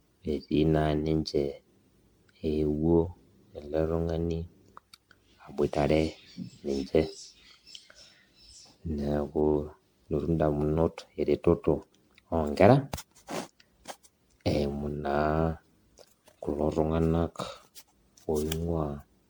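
Generation loss runs throughout the speech, most likely from repeated MP3 encoding, perhaps around ten passes at a rate near 96 kbit/s. Each pass requantises on a shifted frame grid, so the audio sounds swirly, smeared and hollow, with blurred attacks and nothing above 19.9 kHz.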